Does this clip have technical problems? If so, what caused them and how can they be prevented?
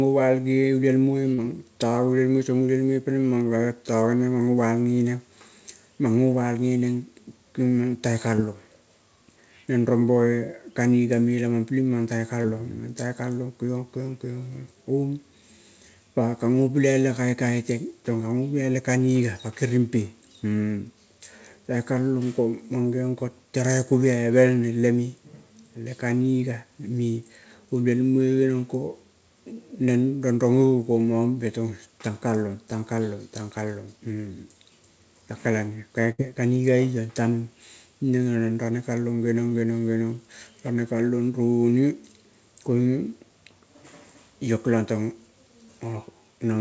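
Yes. There are short concealed packet losses at 1.34–1.40 s, 8.36–8.40 s and 12.42–12.46 s, where about 40 ms, 20 ms and 20 ms of the speech never arrived in time. The receiver bridged each hole by extending the preceding sound and then crossfading back, so you hear a brief smear or wobble. On a spectrogram each appears as a short stretch of copied harmonics or blurred noise. The waveform shows a repeated, slightly softened cycle pattern or a noise-like fill. To prevent this, give the call a steadier network path or a larger jitter buffer, and enable forward error correction.

A burst of packet loss occurs at 36.12–36.20 s, with about 60 ms of speech missing. Concealment carried the last sound forward while fading it, producing a held buzz or fading hiss, and the speech then resumes slightly further on. A spectrogram shows smeared, flattened harmonics dimming across the gap. The waveform envelope tapers and then jumps back to full level. 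Reducing network congestion, using redundancy or FEC, and allowing more jitter-buffer depth would prevent such bursts. Throughout the clip, the call path's audio band stops at 8 kHz.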